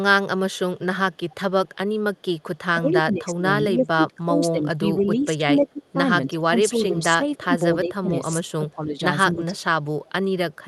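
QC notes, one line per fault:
0.52–2.58 s, echo leak: a faint copy of the voice trails about 297 ms behind, roughly 30 dB down, likely far-end loudspeaker pickup the echo canceller didn't fully remove.
2.75–9.55 s, speech suppressed in double talk: the talker dips in pieces, around 20 dB at worst and about three seconds in total, likely the canceller ducking its own talker along with the echo while the other end spoke.
6.96–7.37, 8.45–8.51 and 9.58 s to the end, echo leak: brief ghostly repeats about 318 ms late, roughly 35 to 40 dB down, likely more loudspeaker bleed slipping past the canceller, heard through the Opus path's usual 12 kHz top end.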